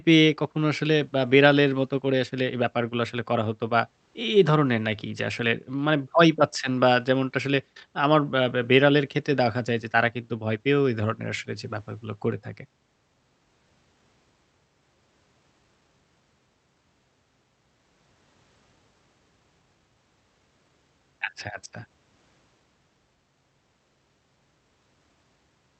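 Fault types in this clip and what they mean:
No faults can be heard in the speech. It has passed through a working WebRTC call path, where the call codec's band limit stops the high frequencies at 8 kHz, which fits Opus.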